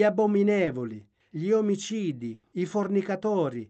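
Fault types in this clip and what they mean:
Short concealed packet loss: At 0.65 to 0.69 s, about 20 ms of the speech never reached the decoder in time, and the receiver covered the hole by extending the sound that came just before. A voiced sound would be carried on at its pitch, anything else as shaped noise, before blending back into the real signal. What comes through is a brief smear or wobble, with 20 ms of the original speech lost.
Burst of packet loss: From 2.33 to 2.45 s, a run of packets was lost or arrived too late to play, leaving a gap of about 100 ms for the receiver to fill. It carried the last sound forward and brought it down as the gap went on, so that a voiced sound becomes a held buzz and other sounds a fading hiss. The speech then picks up again further on, with 100 ms of it gone and no stretch of true silence.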